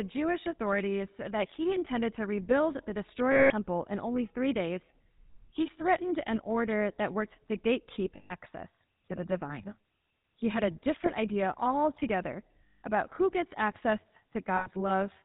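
The clip is speech that has passed through the GSM full-rate codec for its whole length. The codec models the vocal tract and excites it with a regular pulse train, keeping only every third excitation sample. The result is a plainly audible buzzy, gravelly roughness. Nothing above 4 kHz comes through, so the top of the sound is missing. The sound points to the 13 kbps full-rate mode.

There are also lost GSM frames at five points. In each gap the decoder repeats the parameters of the last good frame, so the sound freezes into a rough, metallic ring. The first is at 3.32 to 3.53 s and lasts 180 ms. The second is at 8.16 to 8.32 s and lasts 140 ms. A short 20 ms loss comes at 11.06 s, between "had a" and "idea altogether about who". A 160 ms loss at 12.66 to 12.82 s falls between "idea altogether" and "about who gets access". The last, 100 ms long, starts at 14.56 s, just after "about who gets access".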